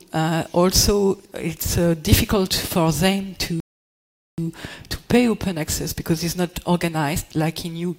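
At 3.60 s the audio halts and goes silent until 4.38 s, a rebuffering stall: playback ran dry of downloaded data and waited for more to arrive. When sound returns it picks up at exactly the point where it stopped, so nothing is skipped and about 0.78 s is simply added to the running time. That seamless continuation is what separates it from a dropout or packet loss, where the gap swallows part of the material.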